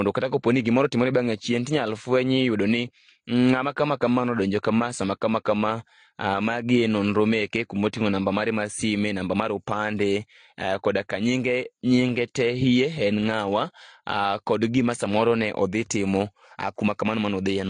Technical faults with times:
0.00-17.69 transcoding between lossy codecs

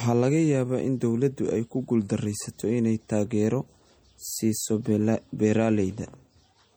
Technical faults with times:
0.00-6.77 MP3 compression

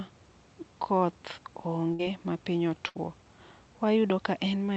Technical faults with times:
1.93-2.02 burst of packet loss
2.89-2.98 burst of packet loss

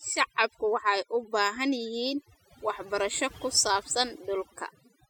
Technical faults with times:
0.00-5.09 overdone noise removal

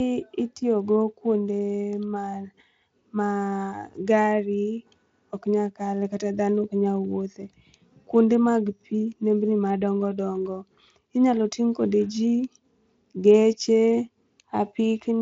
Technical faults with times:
none

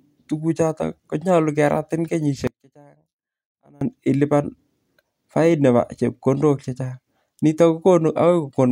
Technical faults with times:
2.47-3.81 one channel inverted

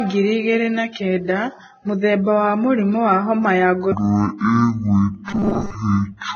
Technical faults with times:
0.00-6.35 Vorbis compression
3.92-6.35 section at the wrong speed
5.28-5.75 robotic sound from repeated short buffers

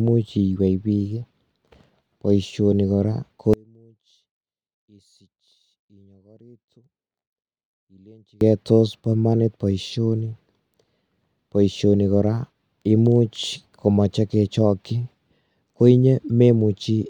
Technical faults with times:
3.53-8.41 one channel inverted

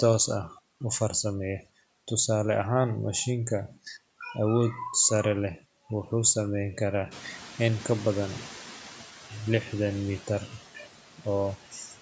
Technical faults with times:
0.00-12.02 noise suppressor artifacts
7.11-8.88 noise suppressor catching up

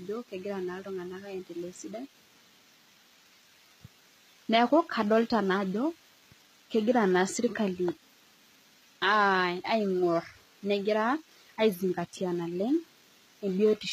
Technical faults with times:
0.00-13.92 HE-AAC compression

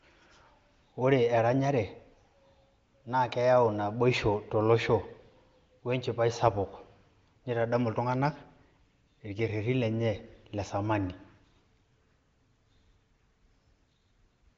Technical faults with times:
none

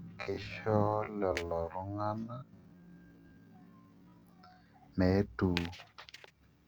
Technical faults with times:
0.00-4.66 time-stretched section

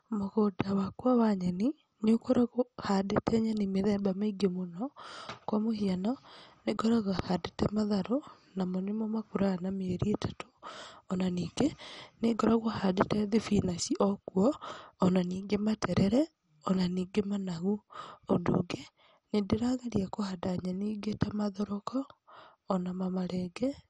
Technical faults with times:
0.00-23.90 MP2 compression

